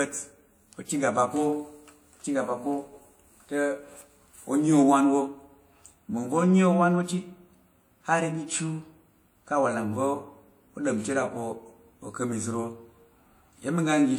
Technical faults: low-bitrate audio saved at a high bitrate

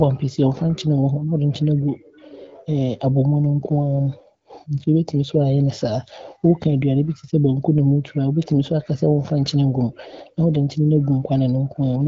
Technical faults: none

